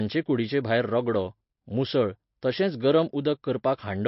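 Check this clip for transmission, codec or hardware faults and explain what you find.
One fault runs through the whole speech clip: the sound is plainly damaged by lossy coding, and the character points to MP3 compression as the likely cause. There is nothing above 5.6 kHz, so sibilants lose their top and the sound is dull. The encoder divides the signal into many frequency lines and, short of bits, discards the treble and zeroes quieter lines frame to frame, giving a watery, swirling texture. That fits a low bitrate around 32 kbps.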